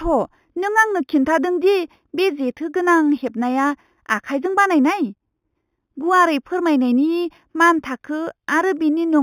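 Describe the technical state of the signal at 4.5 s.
At 4.5 s you're hearing imaging from linear upsampling, present across the whole clip. It sounds like 8 kHz material raised to 48 kHz by straight-line interpolation, so the top is dulled and a faint mirrored band at 4 to 8 kHz, roughly 25 dB down, adds a light metallic shimmer to sibilants.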